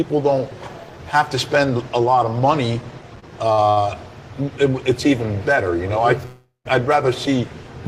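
At 3.19 s, 3.52 s and 3.70 s there are three short stalls from a late packet. Each time, the next block of audio was not there when playback needed it, so the jitter buffer ran dry and the receiver held the last sound for about 29 ms, 56 ms and 67 ms. The audio then resumes exactly where it paused, with nothing lost. Each stall sounds like a brief smeared hold with a slight buzz or dip.

From 6.25 s to 6.67 s a call audio freeze holds the audio for about 0.4 s. The last sound is extended as a decaying buzz or hiss that falls to silence for roughly 150 ms before the audio continues from the point where it stopped. The likely cause is packets delayed in transit, which left the buffer empty. Nothing is dropped, but a gap of about 0.4 s is inserted, and everything afterwards plays later by that amount.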